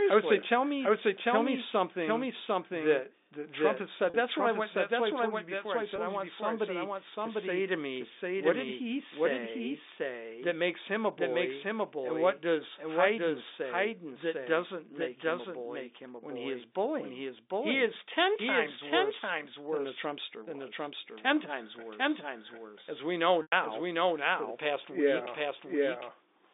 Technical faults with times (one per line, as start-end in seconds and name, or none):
0.00-26.54 doubled audio track
4.10-4.14 packet loss with pitch repetition
5.96-5.98 packet loss with pitch repetition
23.42-23.52 packet loss with pitch repetition